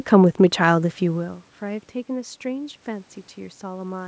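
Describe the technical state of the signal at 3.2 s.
At 3.2 s the signal is intact, with no fault at that moment.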